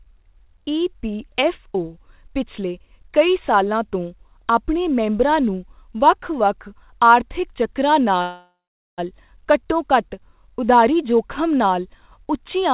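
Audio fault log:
8.22–9.00 s, call audio freeze: right after "ਵੱਖ ਵੱਖ ਆਰਥਿਕ ਚੱਕਰਾਂ" the speech stalls for about 0.76 s. The last sound smears into a fading buzz that drops to silence for about 0.44 s, then picks up cleanly at "ਘੱਟੋ ਘੱਟ ਉਧਾਰੀ ਜ਼ੋਖਿਮ" with nothing lost. Everything after just runs 0.76 s late. That's likely a jitter buffer running dry while packets were held up, with the receiver stretching the last sound to fill the gap. The call band stops at 4 kHz, which fits G.711 at 64 kbps.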